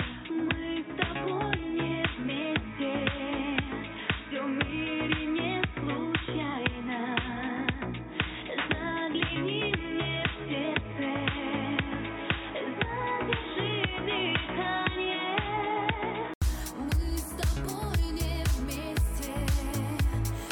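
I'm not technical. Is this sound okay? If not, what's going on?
No. Until 16.4 s the sound is dull and boxy, with nothing above 3.8 kHz and faint background noise. After a brief 80 ms gap it suddenly clears at the same loudness. The likely cause is an input switched to a poorer device.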